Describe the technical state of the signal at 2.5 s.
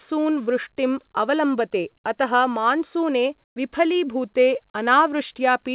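At 2.5 s the speech is intact, carried through the call path as narrowband telephone audio with nothing above about 4 kHz, which fits a G.711 A-law codec.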